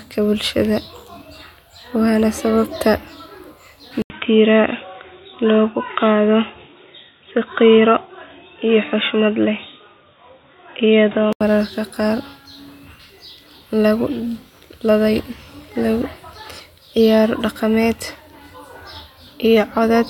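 Input switched to a poorer device, from 4.02 to 11.41 s: just before "mararka qaar", the speech drops out for about 80 ms, then returns dull and boxy with nothing above 3.8 kHz, likely because recording moved to another microphone or a headset's call profile with a narrower passband. Loudness stays about the same, but a faint new noise floor sits roughly 45 dB under the speech. Full brightness returns at 11.41 s.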